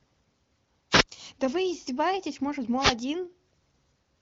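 A short swish of static breaks through the speech at 0.91 s, lasting about 0.12 s, and again at 2.78 s for about 0.17 s. These are wireless microphone noise hits. The analogue FM radio link faded briefly as reflected signals cancelled at the receiver, so receiver hiss momentarily rose. The audio stops at about 7.3 kHz, which fits its passage through an AMR wideband (HD Voice) codec.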